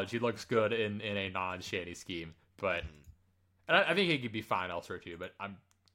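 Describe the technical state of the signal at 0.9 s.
At 0.9 s the speech signal is intact, with no dropout, distortion or other fault present at that moment.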